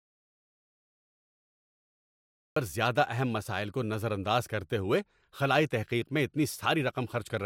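Audio dropout to silence runs from the very start of the speech clip to 2.56 s. The recording opens in total silence, with no room tone or background hiss, and then the speech begins abruptly, already in mid-flow, at "زیادہ اہم مسائل کو". The likely cause is the input being lost, through a disconnected device, a failed link or a stray mute, while the recorder kept writing silence. Whatever was spoken in that opening stretch is gone.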